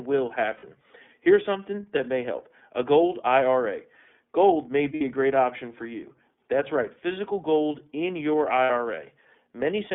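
The speech runs through the iLBC codec for its whole length, squeezed into a narrow phone band of roughly 200 Hz to 3.5 kHz. The coding damage is plainly audible: a rough, slightly synthetic edge that fits iLBC's 13.33 kbps mode with 30 ms frames.

Lost iLBC frames occur at 0.57 s, at 4.95 s just before "a great option for", and at 8.64 s right after "physical gold in your". Each time the decoder fills a gap of 60 ms, which fits two missing 30 ms frames, by repeating the last pitch cycle with added noise. Each gap sounds like a brief held, buzzy vowel, and clear speech returns almost immediately.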